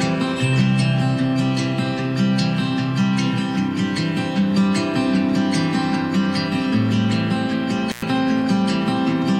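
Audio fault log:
7.89–8.02 s, intermittent contact: the signal drops out for about 107 ms as a loose connection in the cable or plug briefly opens, then closes again. Crackle marks both edges where the contact scrapes and bounces, and faint hiss remains in the gap. On the waveform the amplitude collapses to a thin noise band between two jagged spikes; a spectrogram shows broadband vertical streaks at each edge framing a dark, nearly empty slot.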